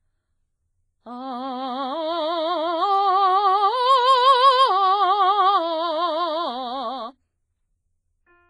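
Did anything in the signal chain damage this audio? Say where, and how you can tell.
Yes. The music rings and washes throughout, with breathing hiss and nothing above 10.3 kHz. The likely cause is WMA compression at the codec stage, consistent with a bitrate near 24 kbps.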